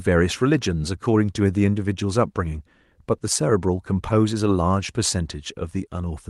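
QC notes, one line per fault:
No faults heard in this speech recording.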